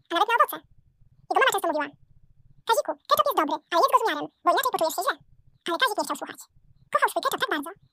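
Throughout, the sound runs twice as fast and an octave high: audio read two samples at a time, each pair taken as one frame.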